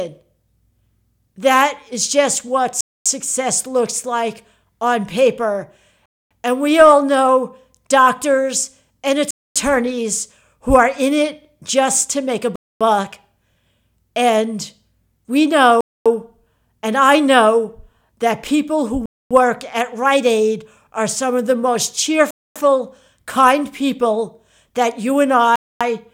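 Speech, interrupted by a gap between chunks: eight silent holes of 250 ms each, starting at 2.81, 6.06, 9.31, 12.56, 15.81, 19.06, 22.31 and 25.56 s. The first falls between "is just what" and "looks like on paper". The spacing points to audio delivered in 3 s chunks, with each join padded by silence or played late. No speech is lost, but each hole breaks the flow at a steady 3.25 s rhythm.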